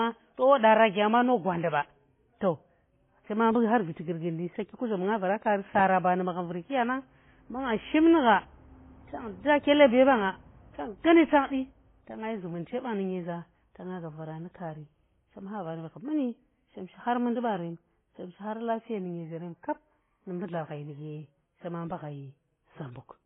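Transcoding between lossy codecs runs from start to end of this speech: nothing above 3.4 kHz survives, and smeared, watery artefacts layer over one another, pointing to a very low-rate AAC-LC pass that was likely re-encoded through HE-AAC and then WMA, each adding its own damage.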